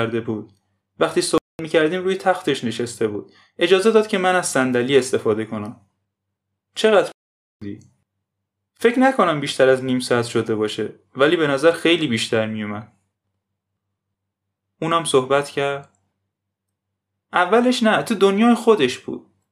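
At 1.38 s the speech just drops out for about 0.21 s, then again at 7.12 s for nearly half a second, picking back up at 7.62 s. These are playback stalls, likely the player starving for data or its thread getting blocked.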